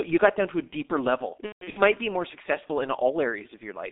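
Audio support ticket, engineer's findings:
G.723.1 codec, whole clip: speech muffled and hoarse, consonants smeared, heavy codec damage. Band runs roughly 250 Hz to 3.7 kHz at about 6.3 kbit/s. The voice model updates only every 30 ms frame, so fast transitions blur. Distinct from plain telephone band-limiting: a band-limited line stays clean, while here the hoarse texture comes from the coarse model.

VoIP packet loss concealed by the speech codec, 1.46–1.81 s, after "to a deeper level", before "be more successful in". About 240 ms lost over 300 ms, fitting eight 30 ms frames. The longest gap is 150 ms. The decoder extends the last pitch and filter as a fading buzzy tone or coloured noise, then mutes from the third lost frame. Unlike a plain dropout, it sounds smeared rather than sharply cut, and weak, distorted speech lingers after recovery.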